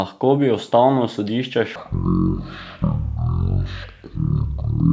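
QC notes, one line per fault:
1.76–4.92 s, wrong sample rate: the speech slows to 0.363 times its proper speed and drops 17.6 semitones in pitch, because the samples are clocked out far slower than they were captured, with no conversion. This fits 44.1 kHz material played at 16 kHz.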